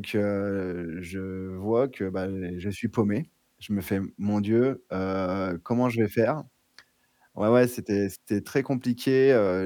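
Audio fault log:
Nothing to log here, since there's no fault anywhere in this bit of speech.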